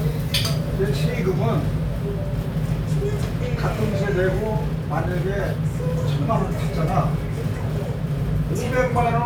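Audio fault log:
No technical faults are audible in this recording of sounds, and the signal stays steady and intact throughout.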